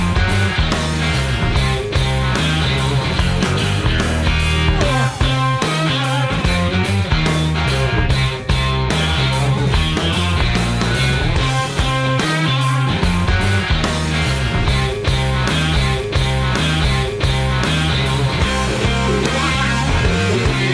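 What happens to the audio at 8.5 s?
Nothing goes wrong at 8.5 s; the audio runs through that point intact, with no dropout, click or other fault.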